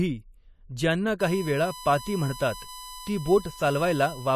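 From 1.20 s to the end, a steady 1 kHz whine sits well under the speech: USB whine, leaking in through power or ground from the bus's 1 ms frame timing.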